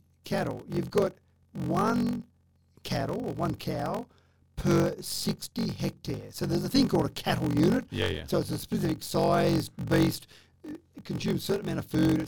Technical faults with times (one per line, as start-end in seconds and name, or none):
0.00-12.28 block size mismatch (padded)